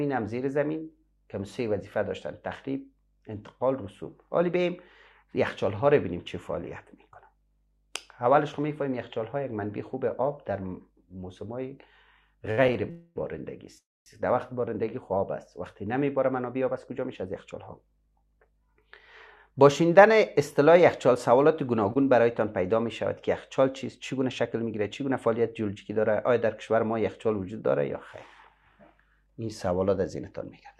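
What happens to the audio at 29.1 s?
Nothing goes wrong at 29.1 s; the audio plays through that moment intact, with no dropout, click, distortion or other fault.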